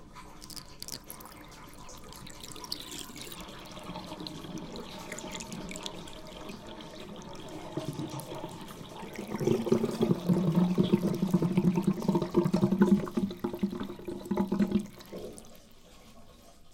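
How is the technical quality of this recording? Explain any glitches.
The recording has one recurring fault: clock drift buffer slips. From 1.29 s to 15.56 s, a click or pop repeats about every 1.3 s, roughly ten times in all. The cause is likely two devices running on separate clocks that disagree by around 150 parts per million. The buffer between them slowly drifts until a few samples, around seven, are dropped or repeated. Each slip breaks the waveform briefly, giving an evenly spaced tick.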